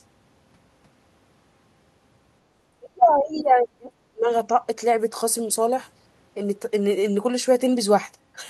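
A speech recording in which the talker's level falls away sharply from 2.79 s to 4.29 s, sinking by roughly 30 dB at its deepest, so the sound turns faint for about a second and a half before returning to full strength. The likely cause is speech suppressed in double talk: with both ends talking at once, the echo canceller could not tell the near talker from the loudspeaker echo and turned everything down together.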